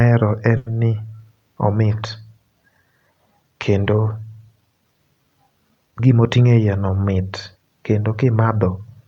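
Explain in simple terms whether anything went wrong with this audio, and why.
Two things went wrong, both caused by packets arriving unevenly over the network.

From 0.57 to 0.68 s there is a short stall from a late packet. A piece of the audio arrived late, so the receiver held the last sound for about 90 ms until it came, then carried on from the same point. This is not a dropout. Nothing is lost, and a sound is simply held a little too long. Everything after it plays about 90 ms later than it should.

From 5.92 to 6.65 s, just before "no mit", there is a jitter buffer speed-up. Audio had piled up waiting to play, so the receiver caught up by cutting out many tiny slivers, about a tenth of a second in total. The speech runs about 11% faster and sounds hurried. Unlike a sped-up tape, the pitch stays the same, so the voice does not turn squeaky.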